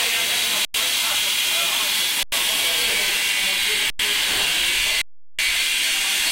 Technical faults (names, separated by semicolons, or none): underrun with held sample